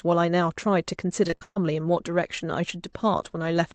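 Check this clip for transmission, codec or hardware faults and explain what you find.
One transmission fault stands out. Repeated packet loss (robotic sound) runs from 1.24 to 1.57 s. The speech drops out in what sounds like about six separate holes, the longest 128 ms. The receiver patches each one by stretching the last good sound, so about two thirds of that stretch is synthetic fill. The result is choppy. The speech passes through a call codec path cut off above 8 kHz, which fits Opus at around 40 kbps.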